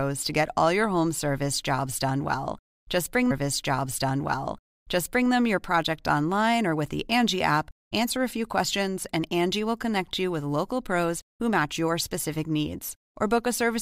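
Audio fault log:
3.30–5.30 s: stream segment repeated. The player fetched or queued the same segment twice, so about 2.0 s of speech plays again after a brief blip at the jump back.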